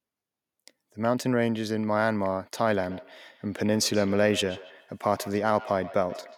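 From 2.87 s to the end, feedback echo between two devices appears: a second device replays the call near a microphone whose echo canceller ignores it. Each syllable returns at intervals of around 150 ms, thin and ringing, about 16 dB below the speech. Room reverb would fade smoothly instead of repeating at a fixed spacing.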